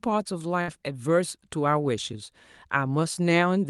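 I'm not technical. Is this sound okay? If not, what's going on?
No. At about 0.61 s there's a burst of packet loss, lasting until about 0.71 s. On a call, audio travels in small chunks, and a few of them here arrived too late or never arrived. The receiving end covered the gap by stretching and fading the last sound it had, for about 62 ms, which you hear as a brief smear. The speech then picks up about 60 ms further along, so that stretch is simply gone.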